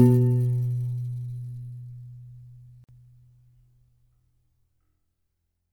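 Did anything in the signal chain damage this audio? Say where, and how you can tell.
Yes, there's a gap at a join of encoded pieces at 2.84 s, the codec stage. The sound just drops out for about 47 ms, to 2.89 s, with edges that are a bit smeared, then resumes exactly where it left off, so nothing is missing. That points to separately encoded segments butted together untrimmed: the encoder's start-up delay and last-frame padding both stayed in, leaving a short hole of silence at the seam.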